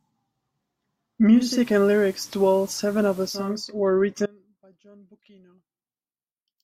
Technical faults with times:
1.29-3.61 digital radio blending to analogue
4.26-6.64 audio dropout to a faint residue

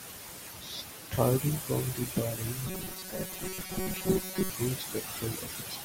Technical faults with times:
2.67-4.50 robotic sound from repeated short buffers

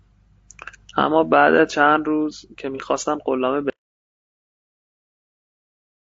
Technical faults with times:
0.00-6.12 low-delay AAC compression
2.75-2.80 AAC frame loss with concealment
3.70-6.12 audio dropout to silence

